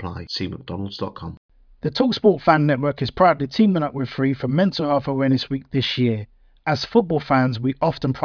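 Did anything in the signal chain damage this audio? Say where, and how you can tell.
No, nothing in the chain damaged this speech recording.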